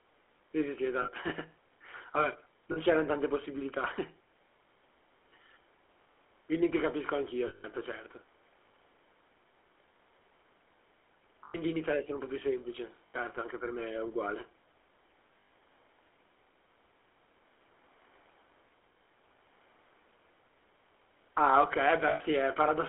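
From start to finish the speech carries the GSM full-rate codec's character: a buzzy, gravelly roughness from coarse pulse-driven excitation, heard within a narrow 300 Hz to 3.4 kHz telephone band. The sound fits the 13 kbps full-rate coder. Room noise sits about 41 dB below the speech.

Lost GSM frames occur at 1.02–1.10 s, 2.72–2.77 s, 7.48–7.65 s, 11.44–11.55 s, 13.06–13.15 s, 15.40–15.50 s and 22.08–22.22 s, lasting 40 to 160 ms. Each gap is bridged by repeating the last good frame, giving a brief rough, metallic ring. The 160 ms gap at 7.48 s rings longest.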